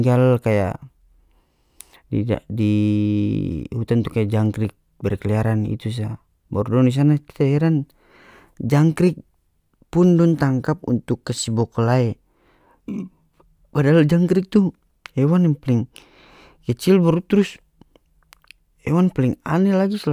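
From 0.51 s to the end, crude rate conversion: samples were linearly interpolated without filtering, consistent with a 32 kHz to 48 kHz change. The resulting inharmonic error, roughly 40 dB below the speech, adds a faint gritty fizz tracking louder and brighter syllables.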